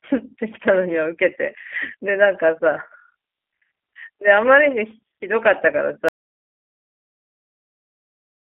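From the start, the speech sounds slightly rough and synthetic, with nothing above 3.4 kHz. This fits G.729 coding near 8 kbit/s, which rebuilds speech from a vocal tract model.

At 6.09 s the sound cuts out to complete silence until the end, likely an audio dropout to silence from a lost input written as silence.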